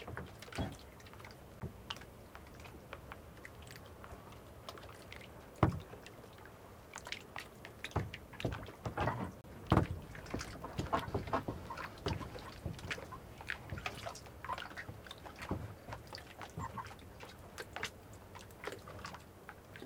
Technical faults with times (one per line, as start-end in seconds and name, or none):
1.60 block of digital silence
9.41-9.44 block of digital silence
9.77-9.82 overlapping chunks
15.82-15.87 overlapping chunks